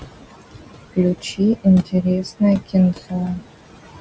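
Throughout the speech, noise suppressor artifacts are present. The suppressor judges bands to be steady noise frame by frame and pulls them down by about 19 dB, so the room noise, which sits about 10 dB below the speech, drops away in the gaps and swells back under each phrase. On a spectrogram the background turns patchy and mottled, and the floor between phrases is much darker than beneath the speech. Nothing shows above 8 kHz.

Speech cut by the noise suppressor happens three times: from 1.21 to 1.4 s, from 1.85 to 2.05 s, and from 2.94 to 3.4 s. At each point the suppressor mistakes quiet parts of the speech for noise and turns them down with the background, by up to about 17 dB in the first two and about 18 dB in the last. Roughly a tenth of a second of speech is affected in each, and it sounds swallowed or faint. The waveform shows short, sudden dips in the envelope, and the spectrogram shows faded patches of speech energy.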